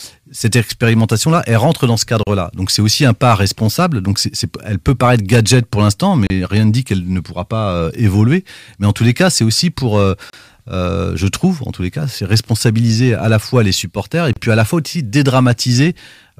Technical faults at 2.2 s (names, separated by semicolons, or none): gap at a join of encoded pieces